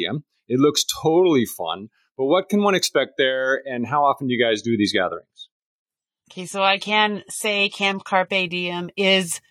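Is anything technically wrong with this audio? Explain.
Yes. From 4.28 s to 8.28 s, right after "there and how often", the speech suddenly dulls and picks up a smeary edge, with nothing above 14 kHz, then snaps back with no gap. This is an adaptive stream at a lower bitrate: the player switched to a leaner encoding while the connection slowed, consistent with a drop from roughly 96 to 32 kbit/s AAC.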